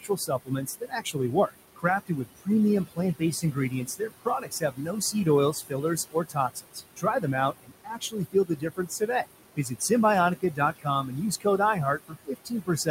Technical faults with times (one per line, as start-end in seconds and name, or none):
0.00-12.91 noise suppressor artifacts
0.00-2.48 speech cut by the noise suppressor
2.87-7.25 speech cut by the noise suppressor
7.63-9.25 speech cut by the noise suppressor
9.56-9.91 speech cut by the noise suppressor
10.41-12.91 speech cut by the noise suppressor